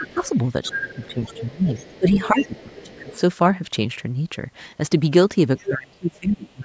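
From the start to 3.2 s, a second voice leaks through under the speech, about 15 dB below it. This is other side's voice leaking through. The far end plays from the talker's loudspeaker, and the echo canceller likely left part of it in the microphone signal. From 0.0 to 0.2 s the speech dips by about 10 dB for a brief moment. From 0.7 to 3.13 s it drops again, by up to about 15 dB, for roughly one and a half seconds in total. This is speech suppressed in double talk. With both sides active, the canceller likely could not tell the talker from the echo and turned both down. The talker sounds pushed back and uneven. At 5.57 to 5.71 s a short scrap of the other voice breaks through, only about 10 dB under the speech. From 5.58 s to the end, the speech is suppressed again, by up to about 25 dB, for about a second. It fades and drops out in pieces. A very faint trace of leakage, far below the speech, appears at 6.15 to 6.19 s.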